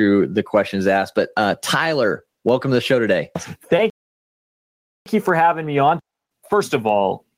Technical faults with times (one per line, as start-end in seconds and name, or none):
0.00-7.37 gain pumping
3.90-5.06 playback stall